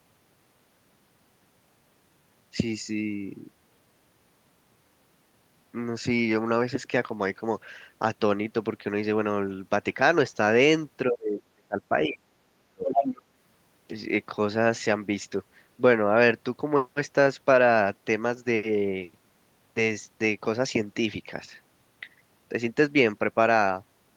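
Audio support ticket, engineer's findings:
Speech suppressed in double talk, 11.09–13.18 s. Talker's level dips hard, deepest very deep, around a second and a half affected in pieces. Likely echo canceller unable to separate near talker from loudspeaker echo, attenuating both.

Other side's voice leaking through, 12.89–13.21 s. Second voice audible on the microphone path, roughly as loud as the talker. Likely residual loudspeaker echo the canceller failed to remove from the microphone signal.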